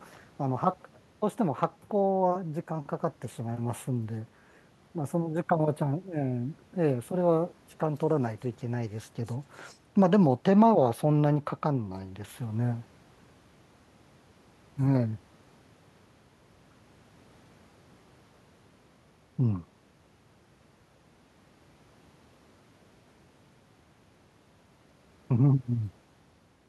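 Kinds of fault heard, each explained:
No technical faults are heard in this speech recording. There is nothing to list under any kind of fault.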